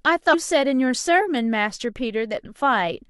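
At 0.33 s and again at 2.44 s you get quick chirpy blips: damaged data in the compressed stream, where the decoder misreads corrupted frames and resyncs.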